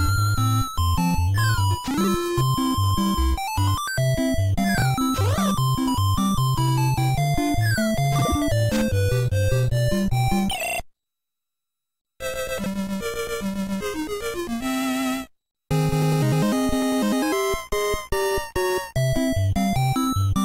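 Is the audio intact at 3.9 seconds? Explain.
Yes, at 3.9 seconds the audio is intact and plays through without any fault.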